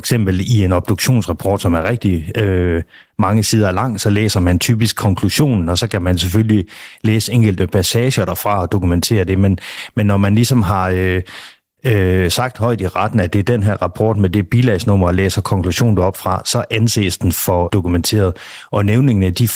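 A speech recording carrying Opus voice compression from start to finish, with plainly audible damage: the voice sounds hoarse, slightly muffled and faintly robotic, which fits a low bitrate around 16 kbps in hybrid mode. On a spectrogram, the band below 8 kHz shows smeared, grainy harmonics from coarse linear-prediction coding, while the region above 8 kHz looks patchy and blocky, energy flickering between 20 ms frames rather than following the voice smoothly.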